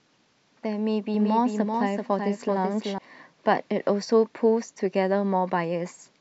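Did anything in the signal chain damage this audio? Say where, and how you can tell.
Yes: doubled audio track, 1.14–2.98 s, likely a slower capture path; a copy about 5 dB quieter trails by roughly 0.4 s, visible as abruptly starting, repeated spectrogram patterns.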